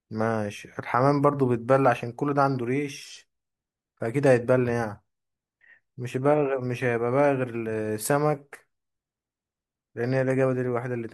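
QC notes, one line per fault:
No technical faults are audible anywhere in the speech signal.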